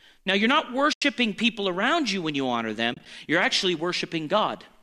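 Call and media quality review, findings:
AAC frame loss with muting, 0.93–1.02 s, between "you're not" and "people around you when". Soft-edged dropout of about 90 ms. This fits nine lost frames of about 10 ms each, likely from the low-delay AAC stream. The decoder zeroes the missing spectrum, and the overlapping windows fade the sound out and back in.

Same fault, 2.94–3.06 s, between "you when you honor" and "you're actually". Short muted gaps scattered over 120 ms, about 50 ms lost in total, the longest run around 30 ms. This gives several brief dips rather than one hole.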